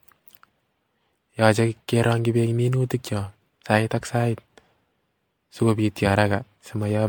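Generation loss runs through the whole speech clip. The sound is swirly and hollow, and consonant attacks come out smeared. The damage is heavier than a single lossy pass would leave. That points to audio likely decoded and re-encoded as MP3 around seven times, at something like 96 kbit/s. Each pass requantises on a shifted frame grid, so noise and spectral gaps pile up, while content still reaches about 19.9 kHz.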